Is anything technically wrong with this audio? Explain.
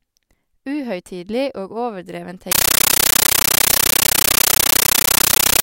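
Yes. From 2.52 s to the end, the speech is replaced by a compressed stream played as audio. An AC-3 bitstream is being read as ordinary samples, not decoded. Each frame becomes a 13.3 ms noise burst, then silence, 31.25 times a second. The result is loud, chattering static.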